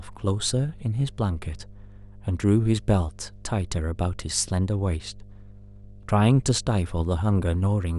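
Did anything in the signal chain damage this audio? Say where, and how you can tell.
Yes. A steady low drone sits under the speech for the whole clip, fairly prominent at roughly 25 dB below it: mains hum at 50 Hz. That points to the analogue wiring stage, where a ground loop or nearby transformer coupled the power line into the signal.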